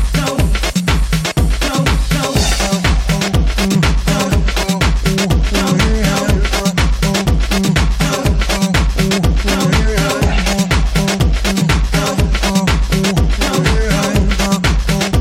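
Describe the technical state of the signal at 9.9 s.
At 9.9 s the signal is intact, with no dropout, clipping, glitch or other fault audible at that moment.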